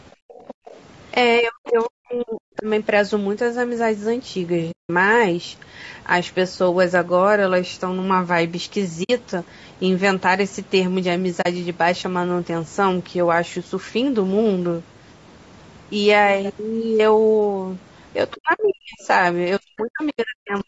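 Low-delay AAC compression runs through the whole recording. The speech sounds rough and grainy, with noise between the harmonics. This is likely AAC-ELD, whose short frames resolve pitch poorly, and the damage fits a bitrate of around 32 kbps.

Other side's voice leaking through, from 0.12 to 0.8 s: a faint second voice, about 20 dB under the speech, likely loudspeaker echo the canceller missed.

Background gated by the echo canceller, at 0.15 to 0.29 s and 0.54 to 0.65 s: the canceller clamps the microphone and the room sound drops by about 40 dB, then returns.

Speech suppressed in double talk, from 1.39 to 2.66 s: the talker's voice dips by roughly 40 dB in pieces over about a second. This is likely the canceller muting both sides during simultaneous talk.

AAC frame loss with muting, at 4.71 to 4.90 s, 9.03 to 9.10 s and 11.41 to 11.46 s: holes of 180, 60 and 40 ms. Lost frames were zeroed, and the overlapping windows fade the sound softly out and back in, which fits 20 ms frames.

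Speech suppressed in double talk again, from 18.33 to 19.08 s and 19.59 to 20.67 s: the voice drops deeply in pieces. Within that stretch, the other side's voice leaks through briefly at 19.8 s, about 25 dB down.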